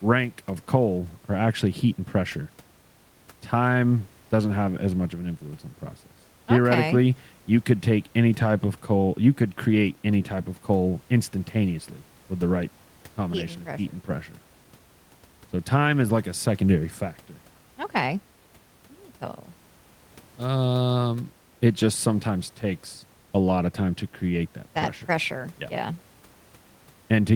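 Speech with no technical faults; the room noise sits about 34 dB below the speech and belongs to the recording space rather than the system.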